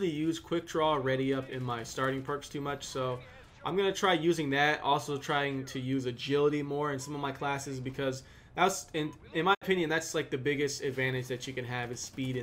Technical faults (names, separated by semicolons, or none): digital broadcast dropout